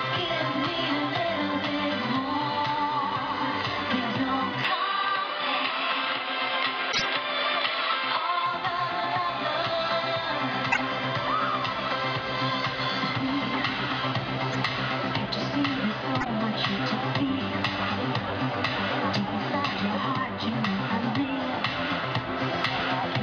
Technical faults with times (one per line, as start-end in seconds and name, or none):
4.65-8.46 input switched to a poorer device
6.92-7.04 corrupt frame decoded
10.72-10.81 corrupt frame decoded
14.52-14.55 corrupt frame decoded
16.20-16.27 corrupt frame decoded